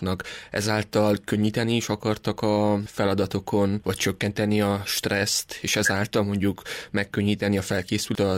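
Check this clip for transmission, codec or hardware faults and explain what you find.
One codec fault is audible, near the very end. At 8.15 s the sound jumps forward, with about a fifth of a second missing. These are compressed frames skipped: a couple of whole frames, each about 93 ms long, were never decoded and played. That jump ahead, with no silent gap or repeated sound, separates it from a dropout or a concealed packet loss.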